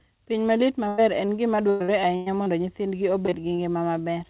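From 0.88 to 2.48 s, repeated packet loss makes the speech choppy and robotic. Seven gaps, the longest about 0.1 s, are patched by stretching the last sound, covering a quarter of that stretch.

Short concealed packet loss follows at 3.26 to 3.34 s, as two back-to-back 20 ms holes, and again at 3.56 to 3.60 s. Each hole is filled from the preceding sound, leaving a brief smear or wobble.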